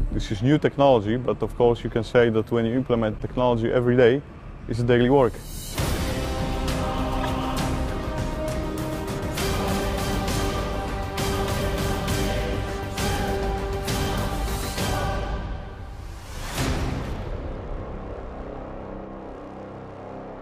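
Two corrupt frames decoded, at 3.12–3.21 s and 7.21–7.29 s, each spanning a few frames: damaged bitstream data produces brief misplaced-energy blips, the second louder, near -15 dBFS against about -30.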